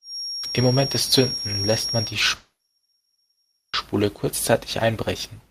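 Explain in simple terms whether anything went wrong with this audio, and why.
Two things went wrong. From the start to 2.18 s a thin, steady feedback whistle near 5.6 kHz sits just beneath the speech, wavering slightly. It likely comes from the loudspeaker's output leaking back into the microphone, held right at the edge of howling.

At 2.35 s a long network dropout begins and lasts until 3.76 s. The speech stops, a fading buzz briefly stands in, and then about 0.9 s of silence follows. The speech from that stretch is lost, likely because the audio never reached the listener over the connection.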